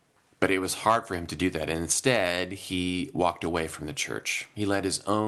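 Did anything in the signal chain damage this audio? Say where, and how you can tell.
No, nothing in the signal chain stood out as damaging on listening, with the speech carried over the call path and its top end stopping around 12 kHz as that codec setting would give.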